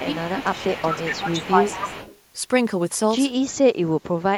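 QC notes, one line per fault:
0.00–0.29, 0.55–0.64, 0.91–1.15, 1.31–2.17 s: echo leak. A copy of the speech trails about 226 ms behind, roughly 20 dB down at first and nearly as loud as the speech at 0.91–1.15 s, likely from a far-end loudspeaker the echo canceller failed to cancel.
0.04–1.96 s: speech suppressed in double talk. The speech dips by up to about 15 dB while the echo overlaps it, likely the canceller turning down both signals together.
3.42–4.37 s: speech suppressed in double talk. The speech drops much deeper, by up to about 35 dB, likely the canceller again muting during overlapping talk.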